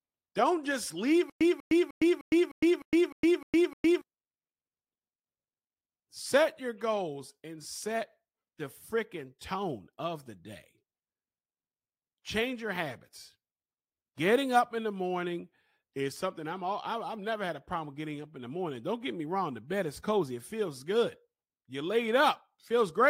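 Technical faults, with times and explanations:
1.30–4.01 s, stutter with silent gaps: right after "just leave", a 194 ms fragment repeats nine times, each followed by 110 ms of digital silence, a steady 304 ms cycle. This is likely a stalled stream replaying its last buffer on each retry, so the audio for that span is lost.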